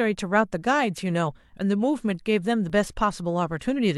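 At 2.70 to 2.73 s there is an overlap between stream segments. Two consecutive segments claimed the same stretch of time, and the player trimmed about 30 ms of real speech at the join. The waveform jumps across the gap, heard as a brief skip.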